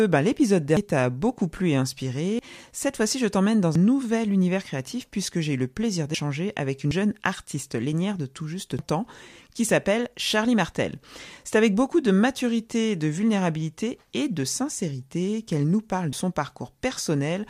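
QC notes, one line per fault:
0.77, 2.39, 3.76, 6.14, 6.91, 8.79 and 16.13 s, dropped buffer (overrun). Each is a sudden skip forward with no gap. A piece of speech, between a tenth and a third of a second, is likely lost to a missed buffer read. The worst is at 8.79 s, after "lénière de tout juste", where about a third of a second is cut before "ans qui s'appelle".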